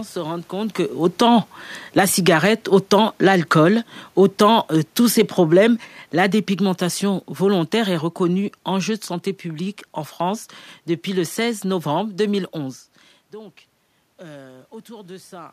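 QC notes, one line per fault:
0.91–9.03 s, automatic gain falling: just after "se rendent compte que", the automatic gain control treats the input as too loud or its background noise as too strong and lowers its gain gradually, by about 12 dB over roughly eight seconds, ending near "santé publique en". The speech starts loud and then sinks steadily. The room noise sinks with it, which shows a gain change in the chain rather than the talker moving away from the microphone.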